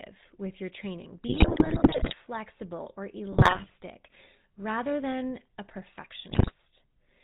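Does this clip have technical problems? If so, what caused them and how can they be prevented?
Yes. The speech throughout has a buzzy, gravelly roughness with nothing above 4 kHz, the sound of the GSM full-rate codec. The codec keeps only a vocal-tract model driven by sparse, evenly spaced pulses, which fits 13 kbps full-rate coding. Routing the call over a wideband codec such as AMR-WB would avoid this.

From 1.28 to 2.14 s, 3.32 to 3.71 s and 6.3 to 6.53 s, the speech breaks into squawks, pops and gargling. These are GSM bit errors: corrupted filter, pitch or gain values bend the spectrum or spike the level frame by frame, consistent with several percent of bits damaged on a weak radio link. A stronger signal and decoder-side muting or concealment of bad frames would prevent these bursts.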